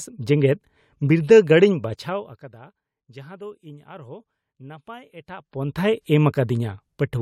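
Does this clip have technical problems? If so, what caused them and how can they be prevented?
No, this speech clip has no technical problems, so there is nothing to trace or prevent. The level rises and falls smoothly where it changes, as a fader would move it.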